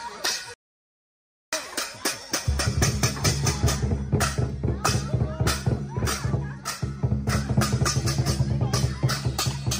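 At 0.54 s the sound cuts out mid-flow and goes silent for nearly a second, picking back up at 1.53 s. That's a playback stall, likely the player running out of data or its thread getting blocked until it recovered.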